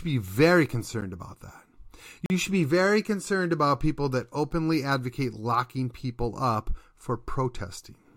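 At 1.01 s, between "be very" and "about that", a 10 ms block of digital silence drops out. The sound stops dead and restarts with no fade. At this length it comes across as a single tick. A second block of digital silence runs from 2.26 to 2.30 s, just before "should be very concerned". At 40 ms it opens an audible hole.

At 4.51 s, between "concerned about people that" and "advocate locking people up", there are repeated frames. An 8.7 ms stretch of compressed audio was written twice, which fits a run of three short codec frames, so the decoder plays that sliver again. It sounds like a tiny stutter rather than a dropout. Unlike the silence blocks, nothing is removed. The sound never goes quiet, and the clip simply grows longer by 8.7 ms.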